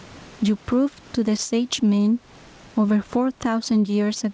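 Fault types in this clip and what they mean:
Gain pumping: The input gain is likely set far too high for the microphone, so a fast limiter or compressor clamps down each time the speech gets loud and releases in the pauses. The level swings by around 10 dB. The speech sounds squashed, with its loud and quiet parts pressed close together.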